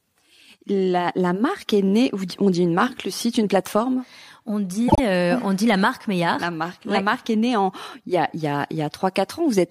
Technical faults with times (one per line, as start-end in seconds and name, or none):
4.87-5.00 repeated frames